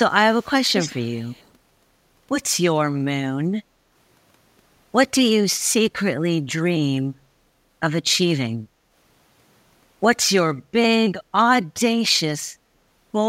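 From 0.30 to 1.51 s, an echo leak is the likely cause: a loudspeaker at the far end fed the speech back into its microphone, and the echo canceller failed to subtract all of it. What slipped through returns as a faint second copy of the speech trailing the original by 173 ms and sitting at about 15 dB below it. That gap is long enough to hear as a distinct repeat rather than added reverberation.

At 3.64 to 3.91 s and again at 8.69 to 8.90 s, the background is gated by the echo canceller. Each time it judged the loudspeaker active, it turned the microphone down hard, and the room sound beneath the speech dips by about 6 dB. The first dip lasts roughly a third of a second and the second about a fifth. Both times the ambience audibly sags and then returns once the canceller releases.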